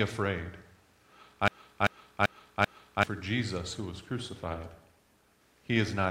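From 1.48 to 3.03 s there's a broken-record loop: a 0.39 s chunk repeats back to back four times, likely a stalled player resending its last fragment. Then from 3.74 to 5.47 s a call bitrate drop makes things rough and muffled for about 1.7 s, which fits the encoder falling from around 96 to 24 kbps.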